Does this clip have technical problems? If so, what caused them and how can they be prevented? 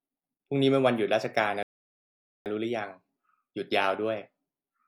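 Yes: a rebuffering stall halts the speech at 1.63 s, where playback outran its downloaded data, and it picks up again at 2.46 s from exactly where it stopped, adding 0.83 s. The waveform shows a flat gap and the spectrogram a blank vertical band. A larger playback buffer or a lower streaming bitrate prevents it.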